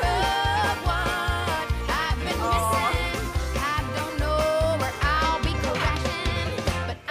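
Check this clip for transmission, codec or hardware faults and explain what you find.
No transmission, codec or hardware faults can be heard anywhere in the clip; the signal stays continuous and stable throughout.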